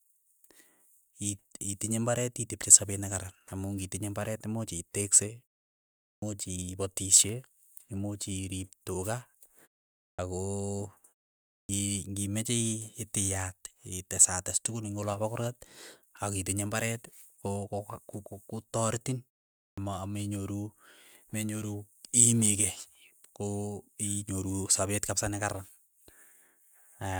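Four times in this speech you get a clipped start after a pause: at 6.14, 10.11, 11.61 and 19.69 s. Each comes after a short gap of roughly half a second to three quarters of a second. The output seems to drop into a sleep state during the quiet and takes around 76 to 85 ms to come back. That swallows the front of the next word, so it pops in abruptly.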